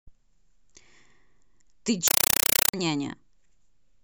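Compressed stream played as audio from 2.08 to 2.74 s replaces the speech with loud chattering static: undecoded data, likely AC-3, sent as 5.33 ms noise bursts repeating at 31.25 Hz.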